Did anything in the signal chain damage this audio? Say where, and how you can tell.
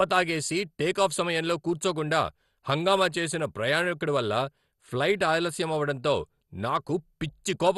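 Yes. The damage happens at the codec stage, across the whole clip. The speech sounds dull, with a gurgling, granular texture, and nothing survives above 12.2 kHz. That points to MP2 compression, likely at a low rate near 64 kbps. Starved sub-bands switch off or are coarsely quantised.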